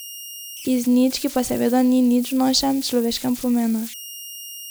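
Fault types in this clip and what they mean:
Converter idle tones: a tone around 3 kHz runs through the speech from start to finish, with a grainy hiss under quieter stretches, about 18 dB below the signal. An undithered delta-sigma converter settles into repeating bit patterns on small inputs, generating these tones.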